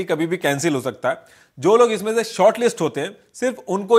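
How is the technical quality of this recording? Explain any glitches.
No technical faults or glitches can be heard anywhere in the recording.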